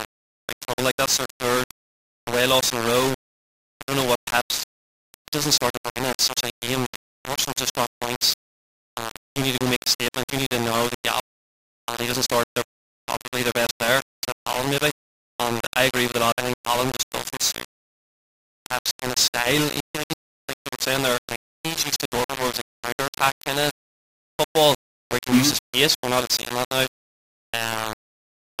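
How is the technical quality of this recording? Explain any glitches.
The technical quality is poor: the speech is heavily distorted throughout, and there is one audible skip.

Low bit depth without dither runs through the whole recording. It was likely rounded to just 4 bits with no dither, so the rounding error tracks the speech. That error sits only slightly below the speech itself, giving a coarse, gritty distortion that shifts with every sound and sputters or cuts out on quiet passages.

Audio missing between chunks occurs at 16.32 s, where roughly a tenth of a second drops out. Processing in 10-second blocks likely lost a slice at the handover and butted the two sides together with no silence between them. It is heard as an abrupt jump in the speech, possibly with a click.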